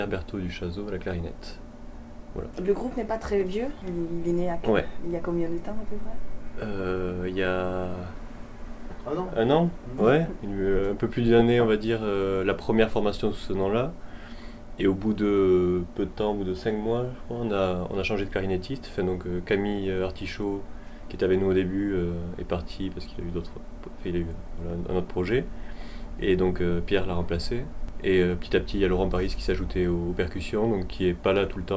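No technical faults can be heard anywhere in the recording. There is nothing to report in time order.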